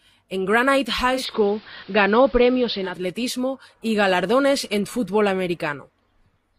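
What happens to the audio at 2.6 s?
At 2.6 s the speech is in the middle of a digital radio blending to analogue, which runs from 1.1 s to about 3.06 s. The receiver lost its digital stream and cross-faded to the station's AM broadcast, with a 272 ms blend at each end. The level shifts by about 3 dB, and a steady hiss sits roughly 30 dB below the speech.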